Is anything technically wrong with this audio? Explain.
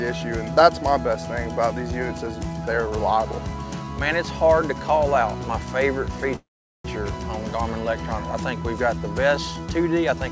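Yes. There is a call audio freeze from 6.36 to 6.86 s. Packets were likely held up in transit, so the jitter buffer ran empty and the receiver had nothing new to play. It stretched the last sound into a short fading buzz or hiss that dies into 410 ms of silence. It then resumed exactly where it stopped, so nothing is lost, but everything afterwards arrives 485 ms late. Throughout, the call codec leaves nothing above 8 kHz.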